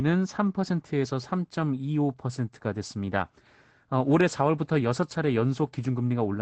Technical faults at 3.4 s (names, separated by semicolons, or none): none